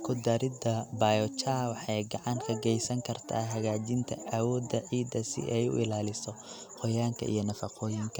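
At 3.51 s there's a sharp snap sitting on top of the speech, fairly quiet at around -30 dBFS, likely an electrical switching spike from a nearby switch arcing into the line.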